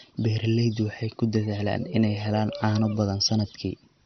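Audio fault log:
Throughout: MP2 compression. The speech sounds dull, with nothing above 6.1 kHz. A gurgling, granular roughness is heard. Upper sub-bands were likely switched off for lack of bits, and the rest coarsely quantised. The heavy damage suggests a low bitrate near 48 kbps.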